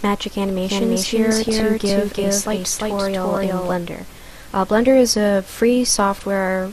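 MP2 compression runs through the whole clip, plainly audible as a dull, band-limited sound with gurgling, granular distortion. The likely cause is MPEG Layer II coding at a rate that fits about 80 kbps, too few bits to keep upper sub-bands switched on and quantise the rest finely.

A doubled audio track runs from 0.63 s to 3.75 s: a second full-band copy, about as loud as the original, trails it by roughly 0.3 s. It has no decay or room colour, and it starts and stops abruptly.

DAB burbling appears from 1.32 s to 1.61 s. Bit errors, at a rate under one percent, got past error correction into the MP2 data across many frames, putting short blips of noise into single sub-bands.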